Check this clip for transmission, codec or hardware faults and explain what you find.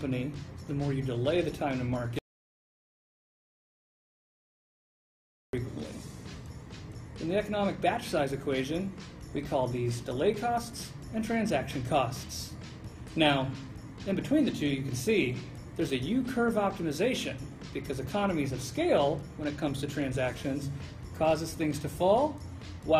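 One fault is present: an audio dropout to silence from 2.19 s to 5.53 s, roughly 3.3 s long. The sound cuts off abruptly mid-flow and returns just as suddenly, with silence in between and no room tone or noise floor. That points to the input path being lost, likely through a disconnected device, failed link or accidental mute, while the recorder kept writing silence. Whatever occurred during that span is unrecoverable.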